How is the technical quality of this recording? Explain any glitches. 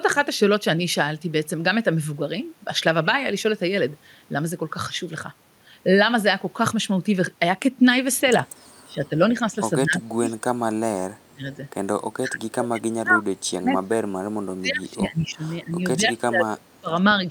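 The recording has a recurring problem in the second half, where the speech is repeatedly pushed down, and it has one short stray echo.

Speech suppressed in double talk, from 8.86 to 10.25 s, 10.87 to 11.59 s and 12.17 to 17.26 s: the speech dips in pieces, by up to roughly 30 to 35 dB. This is likely an echo canceller that could not tell this talker from loudspeaker echo and ducked everything.

Echo leak, at 10.29 to 10.34 s: a faint, brief copy of the speech returns about 194 ms late, around 30 dB below the speech. Residual loudspeaker sound slipping past the canceller is the likely cause. Unlike room reverberation, it is a distinct delayed scrap rather than a smooth tail.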